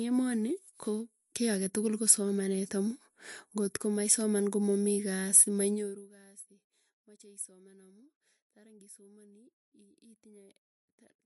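Throughout the speech, MP3 compression damage is plainly audible. Nothing sounds above 11.3 kHz, and the sound turns watery. That points to a likely 42 kbps encode.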